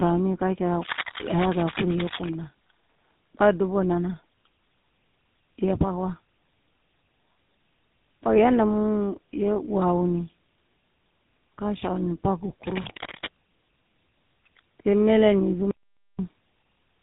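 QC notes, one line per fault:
Throughout, tandem speech coding: the speech went through two low-rate codecs in a row, AMR-NB then GSM full rate, so the second coder was working on already-damaged sound, which is why it's rough, warbly and dull with nothing above 3.8 kHz.
0.80 to 2.31 s and 12.63 to 13.26 s, cable scratch noise: dense, ragged scratching bursts at about 5 dB under the speech, likely a worn cable or connector being moved.
15.71 to 16.19 s, audio dropout to silence: right after "mele ni" the sound cuts to dead digital silence for 0.48 s with no room tone, likely the input briefly disconnecting.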